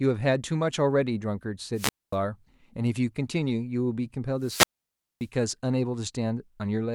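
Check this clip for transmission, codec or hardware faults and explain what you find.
Two wireless microphone squelch dropouts occur, at 1.74 to 2.16 s and 4.40 to 5.28 s. The radio signal fades and the receiver's squelch mutes it. Hiss rises, then near silence lasts 236 ms and 578 ms before speech returns.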